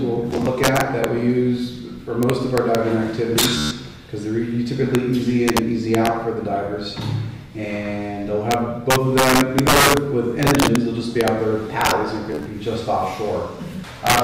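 Integer overflow runs through the whole clip. The loudest peaks are driven about 7 dB past the integer limit, and under one percent of samples cross it. Instead of being held at full scale, each of those samples wraps to the opposite extreme, so loud moments break into sharp, violent cracks. Ordinary clipping flattens peaks into a fuzzy, buzzy distortion. Here the waveform jumps across its full range, which makes a harsher, more explosive snap.

Bluetooth stutter first appears from 0.31 to 0.47 s, where about 67 ms of audio is lost in short, scattered gaps across 160 ms. No gap is longer than about 13 ms, and the pattern fits roughly five missing packets. From 3.58 to 3.71 s a single 133 ms block goes missing, which points to about ten packets in a row. From 12.32 to 12.46 s, 80 ms is lost across 133 ms, with the longest run at about 27 ms.

In each case the receiver fills the gap by replaying its last short slice, so the sound buzzes or rattles like a machine gun rather than falling silent. 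Afterwards it picks up further along, as though it had kept playing underneath.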